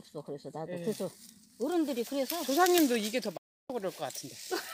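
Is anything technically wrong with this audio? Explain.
Yes. At 3.37 s the sound drops to silence almost instantly, with a fade of only about 3 ms, and stays muted until 3.70 s before resuming mid-stream. This is a digital broadcast dropout. The receiver stopped getting decodable frames, through signal loss or failed checksums, and muted its output until valid data returned. Roughly 320 ms of programme was lost outright, which fits a run of about ten consecutive bad frames, and the audio jumps ahead when it comes back.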